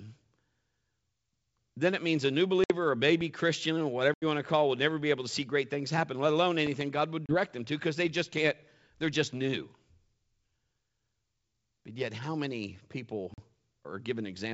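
At 2.64 s the speech drops into a hard-edged silent hole of 60 ms, packet loss on an ADPCM call. The decoder's predictor and step size lose track, so the speech returns slightly distorted before settling.

At 3.09 s and again by 3.23 s come two loud pops, sharp thumps about 5 dB above the speech. A switch or static discharge is the likely cause.

At 4.14 s another 80 ms dropout cuts out, with the same unsteady recovery. At 6.67 s a single loud pop lands. Further dropouts follow at 7.26 s (30 ms) and 13.34 s (40 ms).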